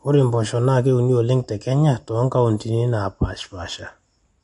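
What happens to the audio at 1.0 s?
At 1.0 s, as through the whole clip, the speech carries what is likely MP3 compression at a low bitrate, around 48 kbps: the encoder drops treble and flickers weak frequency lines, giving a watery, swirly sound. A spectrogram shows a hard ceiling near 10.6 kHz and patchy, blocky gaps below it.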